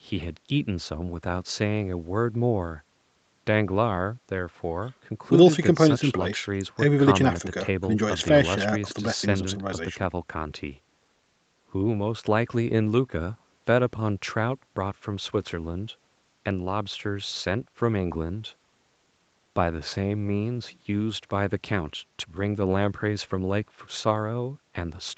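No technical faults can be heard in this speech.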